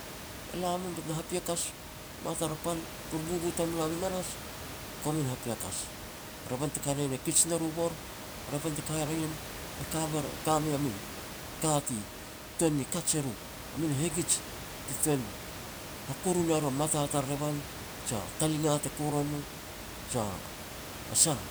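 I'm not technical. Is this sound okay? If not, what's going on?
Yes, this sound is okay: the background noise is just the room the microphone was in, not a problem with the recording.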